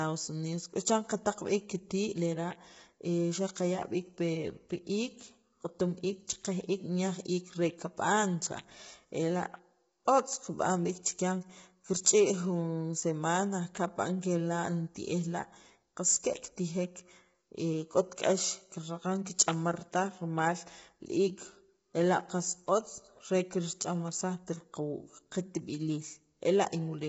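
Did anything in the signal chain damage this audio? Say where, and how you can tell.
Yes, at the codec. The speech sounds rough and grainy throughout, with nothing above 7.7 kHz. That points to likely low-delay AAC compression starved of bits, around 16 kbps.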